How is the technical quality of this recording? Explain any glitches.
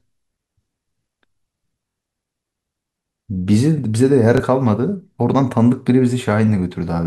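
Two Bluetooth stutter glitches break up the speech, at 1.89 to 1.96 s and 4.37 to 4.40 s. Wireless packets arrived late or were lost, so the receiver replayed its last buffer. That produces a brief buzzing repeat, about 70 ms long at first (consistent with three lost packets) and 23 ms later (one). The speech then resumes slightly further on.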